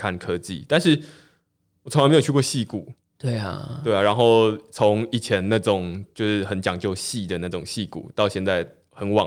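Speech recording with no technical faults detected anywhere in the signal.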